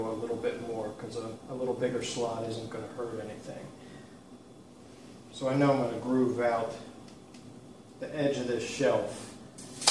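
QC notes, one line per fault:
Nothing stood out on listening.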